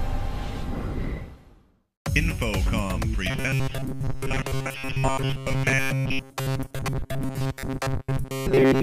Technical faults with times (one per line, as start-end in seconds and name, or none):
3.30-8.82 robotic sound from repeated short buffers